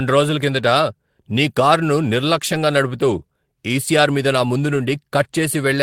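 Lost packets rebuilt from error correction occur at 0.77–0.79 s, 2.53–2.55 s and 4.07 s in this speech. Each time, a short stretch of about 20 ms, which fits a single missing packet, was filled from a low-bitrate backup copy carried in the next packet. The decoder played that copy instead of leaving a gap, so the speech stays continuous, but each patch sounds briefly rougher and noisier than the audio around it.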